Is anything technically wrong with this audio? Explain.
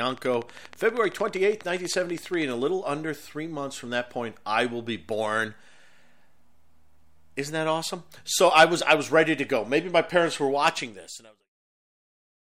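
Yes. From 0.10 to 2.43 s a train of clicks sits over the speech: about thirty evenly spaced, near-identical pulses at 12.5 per second, peaking about 5 dB above the signal. A regular outside pulse, likely interference from nearby equipment or a faulty connection or power supply, produces a steady ticking audible through pauses too. The fade-out from roughly 10.5 s to 11.51 s is smooth and without clicks.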